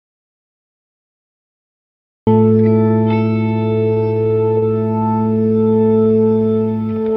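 Music, and it opens in an audio dropout to silence that's already under way when the clip starts. From 0 to about 2.27 s there's nothing but silence, with no room tone or noise floor. The likely cause is the input going away for a moment, such as a loose device, a broken link or a stray mute, while the recorder kept writing empty samples. Whatever was playing in that stretch is simply gone. Next, from 2.88 to 4.64 s, you get repeated stalls, a stutter. The receiver ran its jitter buffer dry 22 times and each time stretched the last bit of sound to bridge the wait. The individual holes are short, the longest about 27 ms, but together they add roughly 0.24 s, about 14% of that stretch, so nothing's lost. It just lurches and drags. Then from 4.80 to 6.25 s there's a jitter buffer slow-down. Here the receiver was building up its reserve by repeating single pitch periods and tiny slices of the quieter moments over and over. 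That pads in about 0.23 s and runs the music at about 85% speed while the pitch stays put, so the held sounds feel drawn out.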